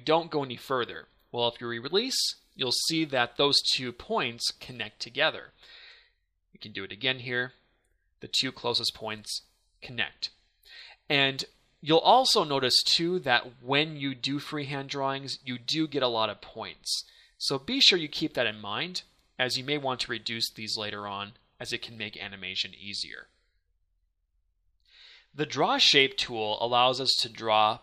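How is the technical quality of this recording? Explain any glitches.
No glitches or faults can be heard anywhere here.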